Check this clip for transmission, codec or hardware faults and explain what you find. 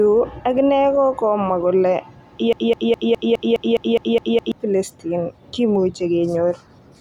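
One fault is present. From 2.53 to 4.52 s there is a broken-record loop: the stream likely stalled and kept resending its last fragment, so one 0.21 s slice repeats ten times, erasing the audio it replaced.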